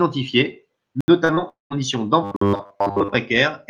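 At 1.01 s the sound drops straight to a block of digital silence lasting 74 ms, back by 1.08 s. Nothing fades in or out, so you hear a short dead hole. That's the signature of a stretch of samples set to zero, typically an output buffer that wasn't filled in time.

Right after that come two short concealed packet losses. From 1.25 to 1.31 s about 40 ms of audio didn't make it to the decoder, and from 1.35 to 1.39 s another 20 ms went missing. In both cases the receiver papered over the gap by extending the preceding sound and then crossfading back to real audio. What you get is a quick smear or wobble rather than a clean gap, and a brief consonant in there can simply disappear.

Between 1.49 and 1.72 s there's a long network dropout, about 220 ms of sound that never gets played. First the last bit of sound is stretched into a buzz or hiss that fades away. Roughly 150 ms of that stretch is effectively silent, and when the audio comes back the lost material is gone, not delayed. 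The likely cause is that no packets arrived for that whole stretch.

From 2.23 to 3.16 s the sound becomes robotic, from repeated short buffers. It turns into a stiff metallic drone locked at 100 Hz that only loosely follows the original contour. Most of this stretch is repeated material, not fresh audio. The likely cause is a roughly 10 ms chunk being looped whenever new data failed to show up, with the real audio skipped over.

Inside that robotic stretch there's a second block of digital silence, running from 2.36 to 2.41 s, about 51 ms. Again it's a hard cut to silence, a short hole punched into the buzz.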